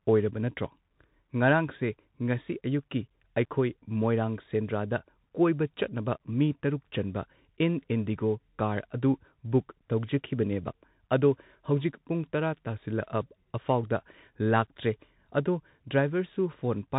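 Throughout the speech, everything sits below 3.8 kHz, s sounds turn scratchy, grainy hiss lies underneath, and loud high passages distort. This is the Bluetooth CVSD headset codec, which fits a 64 kbps link: one bit per sample steps up or down, and the adaptive step can't keep pace with fast rises.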